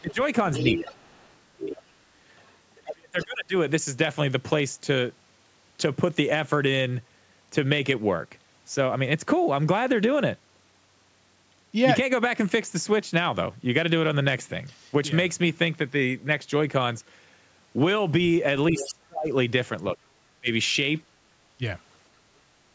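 From 0.0 to 1.89 s the talker's speech dips by up to about 35 dB. This is speech suppressed in double talk. Both sides were likely talking at once. The echo canceller could not tell them apart and turned everything down.

From 0.11 to 1.34 s a second voice sits only about 5 dB under the talker. This is the other side's voice leaking through. The canceller likely failed to remove the loudspeaker sound from the microphone. It returns faintly, about 20 dB down, from 2.39 to 3.25 s.

From 2.84 to 3.54 s the speech is suppressed again, with drops of about 35 dB. The cause is likely another double-talk clash.

From 18.72 to 18.94 s a short scrap of the other side leaks in at about 10 dB below the speech. The likely cause is echo the canceller missed.

From 18.78 to 20.49 s the speech drops by up to about 25 dB. This is likely more suppression in double talk.

From 21.06 to 21.19 s the room sound dips by about 14 dB and then returns. 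This is background gated by the echo canceller. It clamped the microphone down while the loudspeaker played.

From 21.58 to 21.62 s there is a brief dip of about 15 dB, likely a final bit of double-talk suppression. Nothing is heard above 8 kHz, which fits the call's normal microphone processing.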